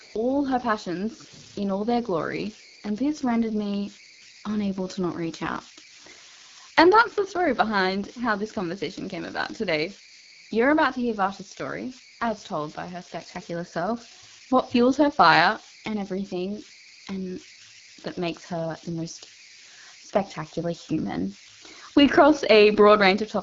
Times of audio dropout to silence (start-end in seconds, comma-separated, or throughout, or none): none